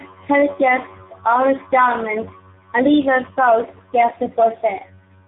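Throughout the speech, tandem speech coding: the audio passed through roughly three speech coders in a row, likely including low-rate AMR-NB, each re-coding the last one's damage. Unlike a single narrowband codec, it sounds compoundedly rough, muffled and warbly, with nothing above 3.8 kHz.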